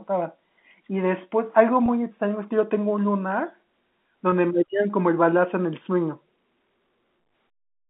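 At 1.86 to 1.88 s and again at 4.30 to 4.32 s, packet loss with pitch repetition occurs. Each gap is 20 ms, which fits a single lost packet. The receiver bridged it by repeating the last pitch period of the speech before it. Both losses are short, so neither fades toward silence; each is heard as a brief held, slightly buzzy stretch. The telephone-band G.711 line, limited to about 3.6 kHz, carries through both.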